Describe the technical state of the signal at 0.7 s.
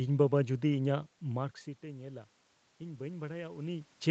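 At 0.7 s the signal is intact, with no technical fault at that moment.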